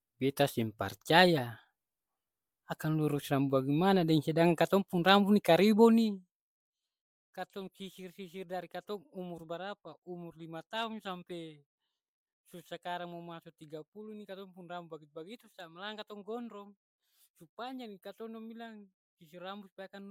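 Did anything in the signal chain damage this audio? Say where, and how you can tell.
Yes. Generation loss from the codec stage runs through the whole clip. The speech has a swirly, hollow quality with smeared consonant attacks, and these artefacts are heavier than a single encode at this quality would leave, which points to something like four MP3 passes at about 128 kbit/s. A single low-bitrate encode sounds dull but stable. Here each re-encode likely quantised on a shifted frame grid, so the noise and spectral holes piled up.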